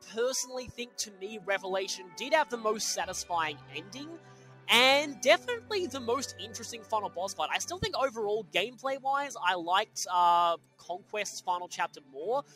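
Throughout, a noise suppressor applied to music or sounds treats sustained material as noise, so gain swings by roughly 10 dB and the sound pumps and thins. Sound cut by the noise suppressor occurs from 0.0 to 2.17 s, 3.55 to 7.17 s, 8.44 to 8.82 s and 9.86 to 12.56 s, with drops of about 10 to 11 dB that sink steady and decaying parts.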